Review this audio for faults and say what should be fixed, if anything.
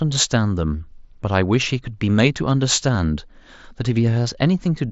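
At 2.95 s, concealed Bluetooth headset packet loss: one stretch of audio, about 7.5 ms long and consistent with a single lost packet, never arrived from the headset. The phone filled the gap by repeating the closest-matching piece of the waveform it had just received. A gap this short is almost completely hidden, leaving at most a faint roughness in the speech as the real signal resumes, heard through the light graininess of the mSBC link. Keeping the headset close to the phone, with nothing blocking the path and less competing 2.4 GHz traffic, would prevent these dropouts.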